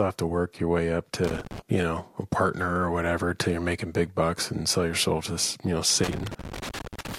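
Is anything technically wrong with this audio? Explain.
Yes. Irregular bursts of scratchy crackle, from 1.24 to 1.60 s after "work your way up" and from 6.04 to 7.17 s after "you know", are loose connector crackle: a worn contact rapidly breaking the signal.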